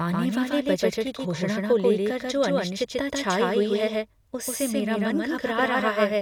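A second, slower capture path likely mixed the speech in twice, creating a doubled audio track: an equally loud copy trails by about 150 ms throughout.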